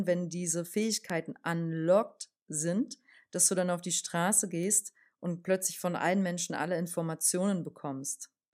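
A flipped bit in memory or on a digital link causes a bit error spike at 1.10 s, after "wenn diese", and again at 4.63 s, before "und plötzlich von allen". The sample value leaps by a power of two and drops straight back, giving a single broadband tick unrelated to the speech. The first peaks near about -19 dBFS across a three-sample run, and the second is a fainter tick at about -25 dBFS.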